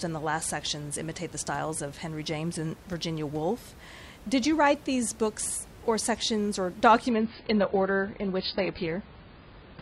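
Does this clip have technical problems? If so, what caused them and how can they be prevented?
Yes. At 7.10 s, right after "books or sections or", the audio abruptly drops to an adaptive stream at a lower bitrate and stays there to the end of the clip. Nothing is left above 5.1 kHz, so the speech turns dull and watery, which points to the player switching to a much lower rung, roughly 16 kbit/s in place of about 96 kbit/s. On a spectrogram the upper band cuts off in a hard horizontal edge at 7.10 s, with no gap in the waveform. The room noise, about 21 dB below the speech, is present throughout. To prevent the switch, give the stream a larger buffer or a steadier connection, or set a minimum bitrate for playback.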